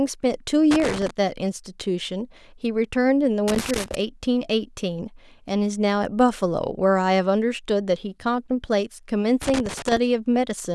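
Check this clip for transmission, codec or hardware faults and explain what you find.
A hardware fault is present: loose connector crackle, at 0.71–1.11 s, 3.48–3.95 s and 9.42–9.97 s. A worn contact making and breaking chops the speech into irregular scratchy bursts, unlike the clean gaps of digital dropouts.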